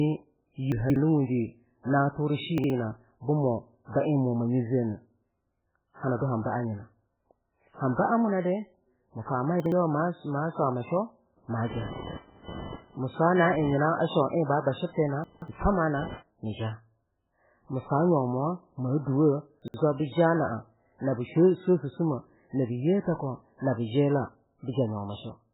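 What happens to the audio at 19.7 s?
Right around there, between 19.62 and 19.74 s, you get chunks out of order. A 60 ms piece of audio turned up one chunk late, so it plays after the piece that should have followed it. Nothing actually goes missing, but the sequence is scrambled and there are three hard joins packed into that span. It comes across as a quick garbled, jumbled blip.

That moment also carries the damage running through the whole clip, which is heavy and most likely MP3 compression at a very low bitrate, something like 8 kbps. There's nothing above 3.8 kHz, so the top end is cut off flat. With that few bits, weak frequency lines drop in and out from frame to frame, which gives it that watery, swirly texture, and attacks get smeared.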